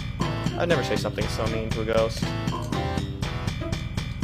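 At 1.93 s a gap between stream segments cuts a hole of about 13 ms of pure silence with abrupt edges. Two segment time stamps fail to meet, which fits 2-second segments, and the player pads the gap. Unlike a dropout, nothing is lost: the sound picks up exactly where it stopped.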